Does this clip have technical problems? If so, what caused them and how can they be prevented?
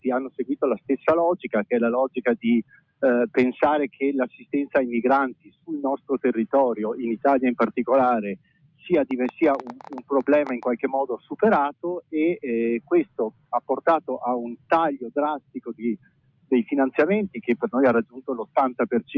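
Yes, there are three problems.

A noise suppressor applied to music or sounds, one tuned for speech, is running on this audio the whole way through. It treats steady tones and tails as noise, so the level keeps swinging by around 20 dB and the sound pumps and thins. To prevent this, switch the suppressor off or use a music mode for anything that isn't speech.

You can also hear sound cut by the noise suppressor in four stretches: 0 to 6.09 s, 8.36 to 8.86 s, 9.81 to 10.1 s, and 11.18 to 18.56 s. Held parts sink by up to about 21 dB, for something like a second and a half in the first stretch and roughly two seconds in the last, while attacks still get through. Disabling that speech-oriented processing before capture or sending should prevent this too.

There's also a train of clicks from 9.11 to 10.64 s. It's a ragged ticking at about 10.5 clicks per second, somewhere around fifteen in all, with peaks roughly 10 dB above the sound. 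It's likely interference from nearby gear or a faulty connection or power supply. Moving cables away from other equipment and checking the interface connection should prevent it.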